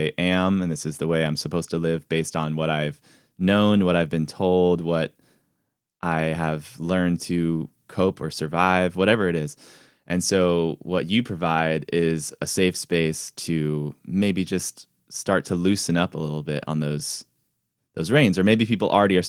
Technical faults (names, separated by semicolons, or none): none